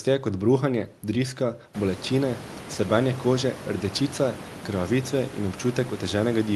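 Nothing here counts as a technical fault: the room's background noise swells by about 18 dB at around a second and a half but still sits roughly 17 dB under the speech, and the call path through Opus at 32 kbps behaves as that codec normally does, with its audio band reaching up to 12 kHz.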